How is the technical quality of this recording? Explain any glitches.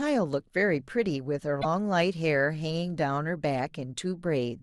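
One glitch affects the recording, from 1.58 to 1.65 s, where a short burst of damaged data in the compressed stream breaks up the speech for about 70 ms. Bytes in that stretch of the encoded file were corrupted, so the decoder misreads the affected frames, loses its place in the bitstream and hunts for the next valid frame header before normal decoding resumes. The result is a brief chirp, squawk, click or short hole in the speech.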